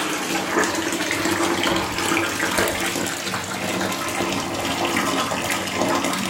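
Sound recording with no technical faults detected.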